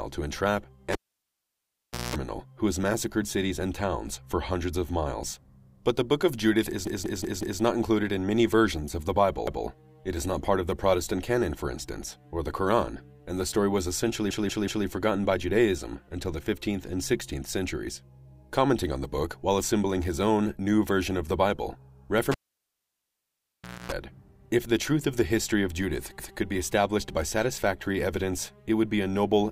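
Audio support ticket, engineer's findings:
Cable pulled and plugged in, 0.93–2.16 s and 22.32–23.92 s: pop, about 1.2 s and 1.6 s of near silence, then a 60 Hz mains buzz (0.2 s, 0.26 s) as the tip touches before the return pop. Loose or yanked connector.

Repeated buffer at 6.87–7.62 s, 9.47–9.66 s, 14.30–14.86 s and 26.19–26.38 s: a 186 ms chunk replays with hard joins, four, one, three and one extra times. It fits an 8192-sample buffer starved by late data, with nothing skipped afterwards.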